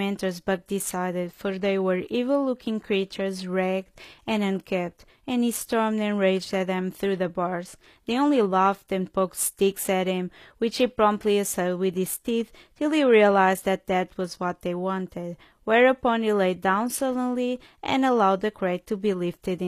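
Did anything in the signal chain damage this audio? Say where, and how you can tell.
Yes, at the codec stage, likely HE-AAC compression at a low bitrate, which fits roughly 24 kbps. The speech has nothing above 14.9 kHz, and the treble below that is rebuilt from copied lower bands, so s sounds come out gritty and metallic throughout.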